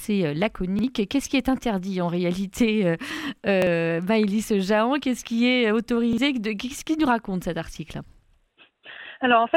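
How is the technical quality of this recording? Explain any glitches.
Three quick stutters stand out, at 0.79, 3.62 and 6.13 s. Each is a repeated buffer: fresh audio arrived late, so the device replayed the last 46 ms chunk once, which fits a 2048-sample buffer. You hear a tiny hard-edged hiccup, with about a twentieth of a second of sound skipped.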